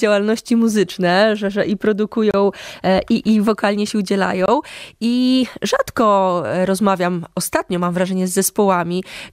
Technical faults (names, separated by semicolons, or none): gap at a join of encoded pieces